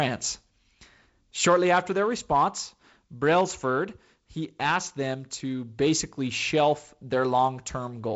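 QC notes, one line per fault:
No fault to list in the QC notes for this speech clip.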